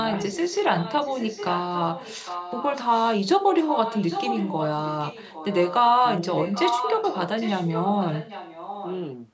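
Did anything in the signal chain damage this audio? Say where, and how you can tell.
Yes: an echo leak in call processing, at 0.09–2.74 s, 3.46–4.69 s, 4.85–5.74 s and 6.31–8.98 s. A copy of the speech trails 804 ms behind, faint to nearly as loud, likely loudspeaker pickup the echo canceller missed.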